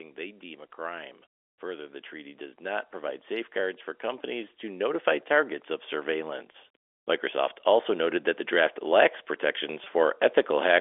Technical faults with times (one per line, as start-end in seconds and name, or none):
0.17-6.40 automatic gain rising
6.53 packet loss with pitch repetition
7.21-9.12 automatic gain rising
9.84-9.86 packet loss with pitch repetition